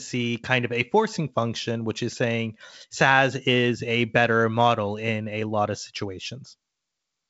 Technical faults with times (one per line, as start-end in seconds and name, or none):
none